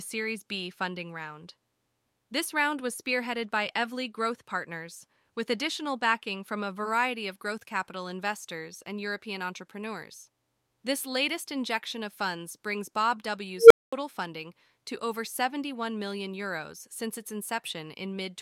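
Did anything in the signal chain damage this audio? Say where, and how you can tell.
Yes. An unstable filter in the call processing stage fires at 13.57 to 13.93 s: a tone near 500 Hz swells over 133 ms, clips, then silence lasts 221 ms before "funding to over". Bad coefficients let the recursive filter's output grow until it overflowed and reset.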